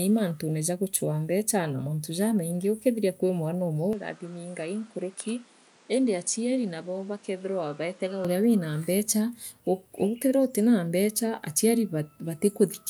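The recording is speech. From 3.93 to 8.25 s it turns dull, with nothing above 10.5 kHz. It drops about 5 dB, and new noise sits about 30 dB down. The input likely switched to a poorer device, with no gap at the switch.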